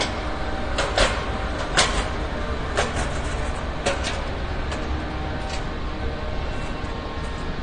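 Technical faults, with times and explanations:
Throughout: AAC compression, likely AAC-LC at a bitrate around 32 kbps. Nothing remains above 9.7 kHz, so the audio sounds dull, and coarse quantisation adds plainly audible smearing and warble. A spectrogram shows a flat ceiling at 9.7 kHz.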